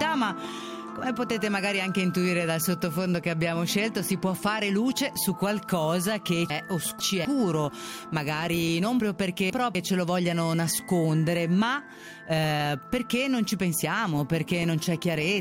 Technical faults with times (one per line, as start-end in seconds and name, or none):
6.50-7.25 chunks out of order
9.00-9.75 chunks out of order